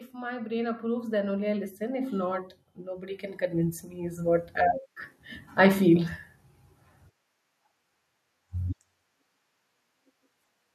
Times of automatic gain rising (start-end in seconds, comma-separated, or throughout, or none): 0.11-4.32